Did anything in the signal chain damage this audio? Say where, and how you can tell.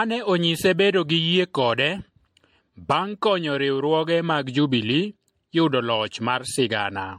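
Yes. At the codec stage, the speech sounds swirly, smeared and hollow throughout, with blurred consonant attacks and nothing above 16.5 kHz. That's more damage than a single pass around 70 kbit/s would cause, so it's likely MP3 generation loss from roughly seven encodes, each adding fresh quantisation noise.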